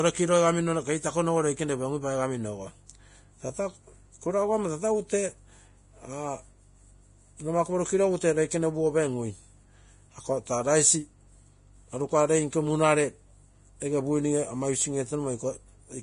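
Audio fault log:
throughout: Vorbis compression, likely, at heavy strength: nothing above 10.5 kHz, and the treble below it turns hissy and grainy rather than simply dull, with roughened tones and smeared consonant attacks. The damage points to a low bitrate, near 30 kbps.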